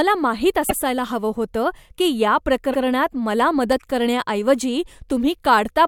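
A short speech recording stutters twice. From 0.69 to 0.78 s, just before "हवं होतं", a 96 ms stretch plays and then immediately plays again. The same thing happens from 2.73 to 2.82 s. These are repeated frames: a block of compressed audio, which fits a run of four frames, was written or sent twice, so the decoder plays it once more and each repeat adds 96 ms. Separately, two isolated sharp clicks occur at 0.98 s, again just before "हवं होतं", and at 3.72 s. Each click shows as a thin vertical line across the spectrum, with no gap in the sound around it. These are dropped samples. The cause is likely a tiny loss of a fraction of a millisecond, which makes the waveform jump straight from one value to a later one, too briefly to remove anything audible except the click itself.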